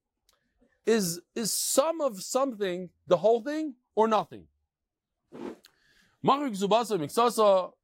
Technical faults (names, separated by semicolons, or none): none